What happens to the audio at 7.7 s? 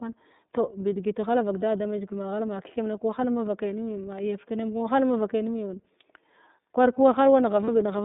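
A brief held, slightly buzzy vowel-like tone briefly replaces the speech from 7.65 to 7.68 s, lasting about 30 ms. The voice then snaps back almost immediately. This is lost iLBC frames. A gap of that length fits a single missing 30 ms frame. The decoder covered it by repeating the last pitch cycle mixed with noise. Because each iLBC frame is decoded independently of the one before, normal speech returns as soon as the next frame arrives.

Around that moment, and across the whole clip, the speech has a clear but slightly rough, synthetic quality. It is confined to a narrow band of roughly 200 Hz to 3.7 kHz, with nothing above. This is the iLBC codec, and its damage is plainly audible. The 30 ms frame structure fits iLBC's 13.33 kbps mode. Each frame's excitation is coded on its own at a low rate, which produces the coarse, synthetic texture, while the narrowband path removes the upper frequencies.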